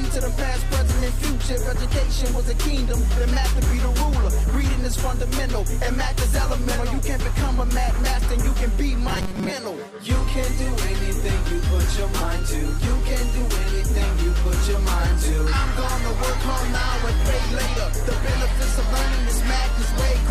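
Audio arriving too seldom likely made the playback software repeat a very short buffer, about 5.3 ms, for most of the span from 9.08 to 9.52 s. This robotic sound from repeated short buffers imposes a rigid, metallic 188 Hz buzz that roughly follows the underlying audio.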